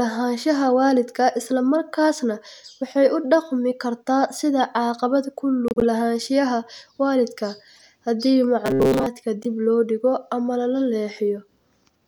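A corrupt frame decoded at 5.68 to 5.84 s, just before "lahaanshiyaha waalidka haddii", produces a short burst of chirping noise across several consecutive frames. Flipped bits in the compressed data made the decoder misread gains and codes, so energy lands at wrong frequencies for the duration of each damaged frame. The same fault recurs at 7.76 to 7.81 s as a quicker blip covering a couple of frames.

Robotic sound from repeated short buffers follows at 8.66 to 9.06 s, right after "lahaanshiyaha waalidka haddii". The speech turns into a rigid, metallic buzz at 134 Hz that still loosely tracks the syllables. Fresh audio likely arrived too seldom, so playback kept looping a slice of roughly 7.5 ms while most of the real signal in that stretch was skipped.

A final corrupt frame decoded at 9.43 to 9.46 s, just before "loo dhigo ama la", is a brief squeak from a single damaged frame.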